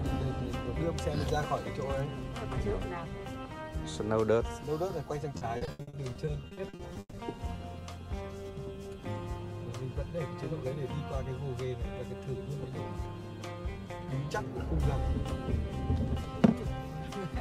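From 5.37 to 7.15 s the audio turns choppy; this is repeated packet loss, with gaps up to 140 ms patched by repeating earlier sound, about 37% of the stretch.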